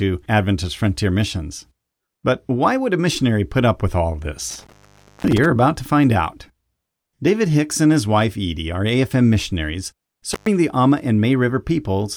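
Right after "put up with all", from 4.50 to 5.45 s, the speech drops out with crackle at both edges, for about 0.52 s, and returns at "about to find out". A shorter 0.12 s cut follows at 10.32 s. This is intermittent contact: a loose cable or plug briefly opening the line.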